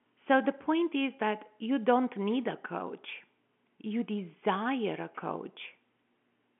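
No technical faults can be heard in this speech.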